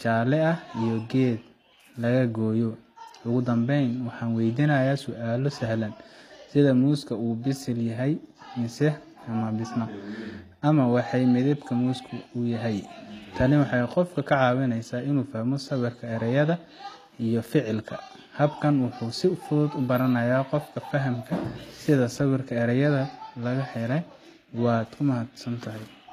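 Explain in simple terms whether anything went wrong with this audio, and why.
The speech has plainly audible damage from start to finish, likely from HE-AAC compression. The treble is not the real one but a copy rebuilt from lower sounds. So s sounds come out gritty, metallic or lispy. The top end reaches high but sounds false.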